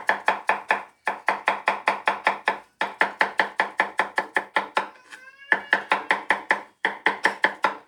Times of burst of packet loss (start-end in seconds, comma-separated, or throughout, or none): none